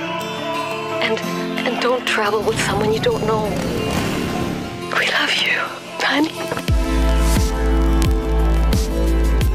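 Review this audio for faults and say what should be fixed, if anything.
Word clock ticks run from 0.10 s to the end at 9.54 s. Sharp ticks recur about every 20 ms, hundreds in all. The receiving device runs on its own clock, roughly a tenth of a percent off the sender's, so one sample is dropped or repeated at each slip. To prevent this, lock the receiver to the incoming digital signal or a shared word clock.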